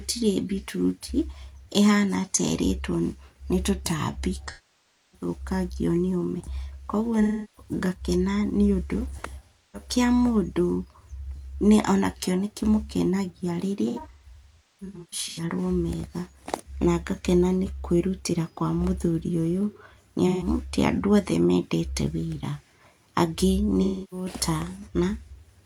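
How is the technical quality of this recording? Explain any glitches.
The speech has repeated AAC frame loss with concealment: smeared, phasey patches at 4.48–5.28, 7.22–7.71, 9.44–9.88, 20.27–20.47 and 23.82–24.27 s, plus a scattered stretch at 13.88–15.43 s. The decoder rebuilds each missing frame from the last good spectrum instead of the real audio.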